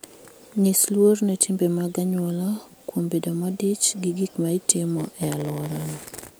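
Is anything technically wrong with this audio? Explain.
Yes. A block size mismatch (padded) starts at 4.96 s, just after "modich gi gik ma", and lasts to 6.36 s. One stage hands over blocks shorter than the next stage expects. The missing part of each block is filled with silence, so a tiny gap repeats in every block. This is heard as a buzz at 86.1 Hz, which fits a 512-sample read block. The speech also drags, running at 0.938 times normal speed, yet its timbre stays the same.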